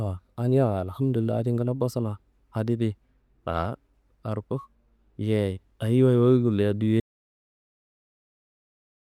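At 7.0 s the speech just stops dead and we get an audio dropout to silence, plain silence with no room tone, running right to the end at 9.09 s. Most likely the input got disconnected or muted while the recorder kept writing.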